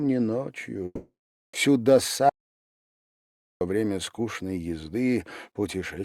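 At 0.85 s the sound breaks off and the last bit of it gets stretched into a fading buzz for roughly a fifth of a second, then there's about 0.46 s of near-silence before things pick up again at 1.55 s. That's the classic shape of a long network dropout, likely packets that never arrived. The receiver papered over the gap by extending what it last had, but about 0.68 s of real audio is simply gone.

Then from 2.29 s to 3.61 s there's a dead hole, about 1.32 s of silence with no room tone or background underneath. The sound cuts out abruptly and comes back just as abruptly, with whatever happened in between lost. That's an audio dropout to silence, likely the input going missing for a moment (a loose connection, a failed link or a stray mute) while the recorder kept writing silence.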